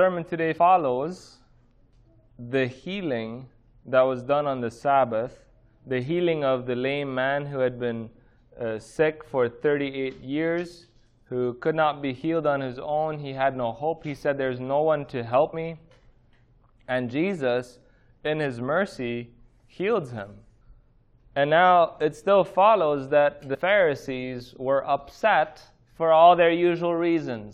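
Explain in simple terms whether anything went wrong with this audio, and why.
Compressed frames were skipped three times: the player dropped whole chunks of the compressed audio, because they were missing from the file or rejected as damaged. Each chunk lasts about 23 ms, so the sound jumps forward. At 0.57 s about a seventh of a second vanishes, and at 15.52 s and 23.53 to 23.56 s about a tenth of a second each.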